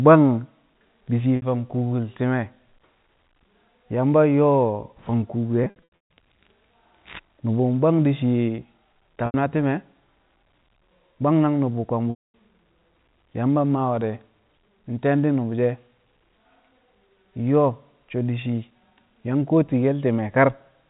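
Packets were dropped, and the receiver bridged each gap by looping the last pitch period. This happened at 1.36 s between "di̱ shi̱" and "fang kuukul ti̱me̱", at 5.64 s after "fang kuuku" (scattered over 520 ms), and at 9.26 s and 12.1 s. The packet loss with pitch repetition sounds like brief, buzzy held tones fading toward silence.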